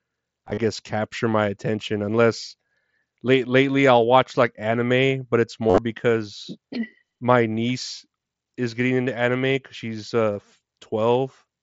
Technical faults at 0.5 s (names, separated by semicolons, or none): concealed Bluetooth headset packet loss